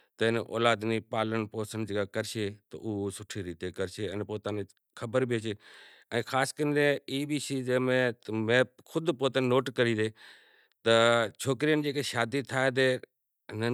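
No technical faults are audible.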